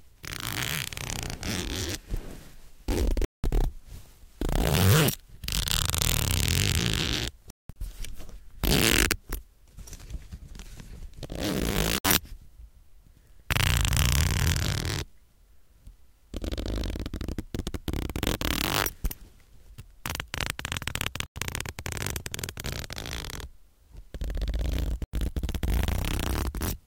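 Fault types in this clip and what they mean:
Digital broadcast dropout: at 3.25, 7.50, 11.98, 21.26 and 25.04 s the receiver loses valid frames and mutes, leaving silent gaps totalling 64 to 224 ms each.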